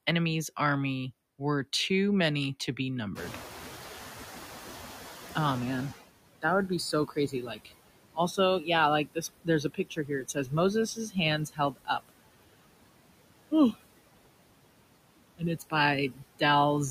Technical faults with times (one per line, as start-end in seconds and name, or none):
0.00-16.91 noise suppressor artifacts
3.15-6.00 noise suppressor catching up
6.92-7.73 speech cut by the noise suppressor
9.05-10.53 speech cut by the noise suppressor
10.95-11.16 speech cut by the noise suppressor
11.49-11.89 speech cut by the noise suppressor
16.10-16.42 speech cut by the noise suppressor